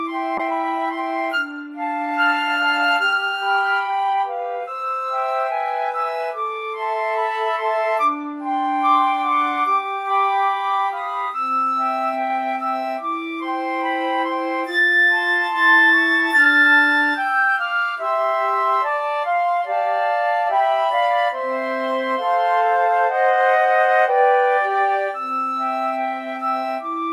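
From 0.38 s to 7.33 s the audio turns coarse and duller, a call bitrate drop consistent with the encoder falling from 64 to about 27 kbps, bottoming out for roughly 5.9 s.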